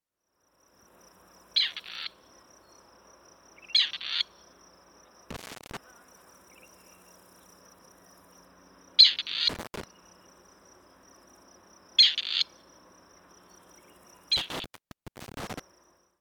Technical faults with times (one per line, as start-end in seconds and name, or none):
5.30-5.77 intermittent contact
9.49-9.84 intermittent contact
14.37-15.60 intermittent contact